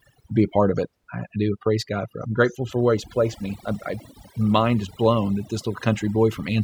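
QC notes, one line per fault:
Throughout: overdone noise removal. The quieter edges of the speech are hollowed out, while the gaps between phrases drop to near silence scattered with twinkling specks. A noise reduction stage was pushed too hard on a noisy source: any frequency band sitting close to its noise estimate gets pulled far down or switched off outright, so low-level parts of the voice are removed along with the noise, and stray surviving bands flicker as the specks.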